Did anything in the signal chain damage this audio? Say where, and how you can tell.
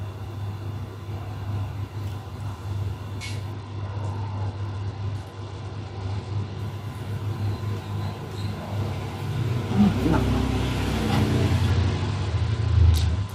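Yes. From 3.52 to 6.59 s, and again from 11.70 s to the end, the treble dulls and a gritty grain rises. This is a Bluetooth SBC bit pool drop at the codec stage. The encoder starved its top sub-bands under link congestion, which fits a fall to about 90 kbps.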